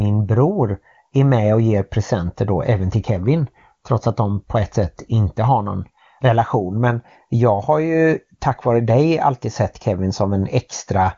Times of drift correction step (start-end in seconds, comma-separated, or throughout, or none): none